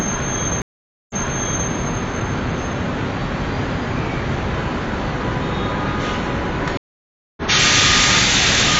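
At 0.62 s the sound cuts to silence for 480 ms, then comes back about 0.6 s earlier than where it stopped, so a stretch is heard twice before things settle by 1.70 s. At 6.77 s a second gap of 597 ms follows, and this time the audio resumes roughly half a second further on, skipping material, with recovery by 7.42 s. Both are stream reconnects: the connection dropped, the player went quiet, reconnected and began a fresh decoder mid-stream, with the server resending a burst the first time and jumping to the live point the second.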